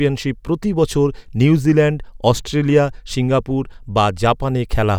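A short recording of speech, with no technical fault to be heard anywhere in it. There is nothing to time or trace to a cause.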